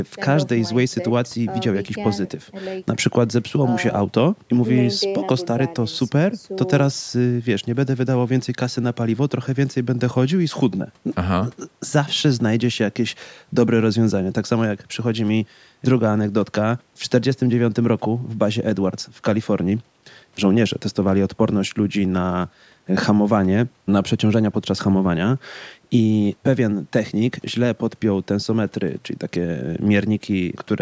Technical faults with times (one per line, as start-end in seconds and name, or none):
none